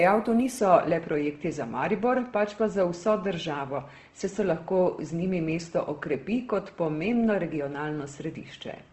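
A speech clip with Opus compression damage throughout: the sound is grainy and rough, with a hard ceiling near 12.1 kHz, likely from a low-rate CELT encode around 16 kbps. A spectrogram shows the flat cut-off and bands filled with smeared noise.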